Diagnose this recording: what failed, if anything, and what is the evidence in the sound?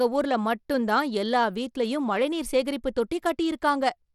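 Through the whole clip the speech carries a gritty, grainy layer, and the top end is thin and unsteady, with nothing above 17 kHz. The damage is plainly audible from start to finish. The fault sits at the codec stage and is likely Bluetooth SBC compression, with a bitrate that fits roughly 96 kbps. SBC splits the sound into a few wide sub-bands with no hearing model, so the upper bands are starved of bits while the rest are coarsely quantised, which leaves the grit and the ragged treble.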